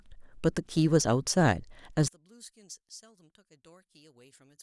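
From 2.08 s to the end, the speech collapses to a faint residue, about 29 dB down, likely because one channel inverted its polarity and the centred signal cancels on mono summing.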